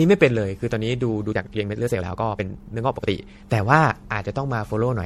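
Throughout the speech there is generation loss: the audio sounds swirly, hollow and smeared, with consonant attacks blurred well beyond what a single lossy pass would cause. This likely comes from repeated MP3 decoding and re-encoding, perhaps around ten passes, at a quality that fits roughly 64 kbit/s. Each pass requantises on a shifted frame grid, so the damage accumulates. A spectrogram shows patchy holes and smeared, flickering blocks across the upper bands.

From 1.26 to 3.10 s there is a time-stretched section. The pace jumps to 1.7 times speed while the pitch stays put, so the speech sounds choppy and rushed. The likely cause is software squeezing this stretch to fit a shorter length, keeping the pitch by dropping short pieces and splicing the remainder together. On a waveform, syllables sit visibly closer together in this span, with small discontinuities at the splice points. A spectrogram shows compressed timing but unchanged harmonic spacing.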